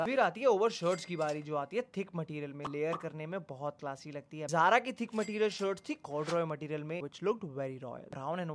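No technical faults are audible anywhere in the clip.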